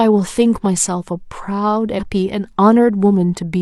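A brief glitch at 1.95 to 2.00 s in the speech, about 50 ms long, comes from damaged data in a compressed stream: corrupted bytes make the decoder misread those frames and lose sync until it finds the next valid frame header.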